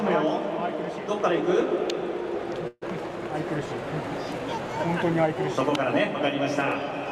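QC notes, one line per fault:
2.67–2.84 s, call audio freeze: the last sound is held as a fading buzz that ends in 30 ms of silence, filling about 140 ms in all. Audio resumes where it stopped, nothing lost, running 142 ms late. Likely delayed packets emptied the jitter buffer.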